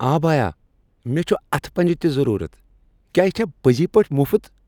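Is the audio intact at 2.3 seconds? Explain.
Yes, the speech at 2.3 seconds is intact, with no dropout, click, distortion or other fault at that moment.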